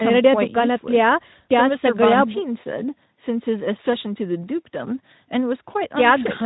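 Around 4.42 to 4.44 s there's a brief VoIP packet loss concealed by the speech codec: about 20 ms of audio went missing, which fits a single lost frame. The decoder covers the gap by stretching the last pitch and filter at falling gain, so the speech turns into a buzzy tone or coloured noise that fades, then takes a moment to firm up again.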